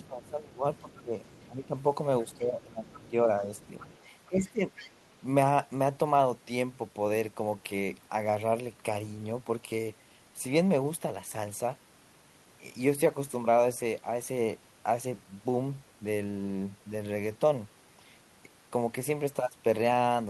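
From 0.03 to 0.28 s, the other side's voice leaks through faintly, about 30 dB below the speech. It returns at 0.92–1.47 s (about 25 dB down), 2.32–2.37 s, 2.91–2.99 s, and 3.57–5.18 s, where it is loudest at about 20 dB down. The likely cause is loudspeaker echo that the canceller left in the microphone signal. On a spectrogram it shows as faint, separate harmonic traces beneath the main speech.

Overlapping this, speech suppressed in double talk runs from 0.08 to 3.49 s. For about two seconds in total, the talker dips by up to about 15 dB. The waveform envelope sags in patches. It recurs at 4.26–4.65 s, most likely because the canceller attenuated both voices during overlap.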